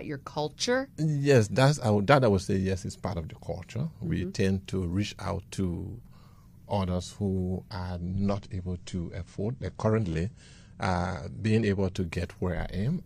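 Right after "others who are", at 7.96 s, the adaptive stream switches to a lower bitrate for four seconds, until 11.96 s. The treble is cut off above 9.9 kHz, and the artefacts thicken abruptly, which fits a drop from about 96 to 32 kbit/s AAC. Unlike a dropout, there is no gap.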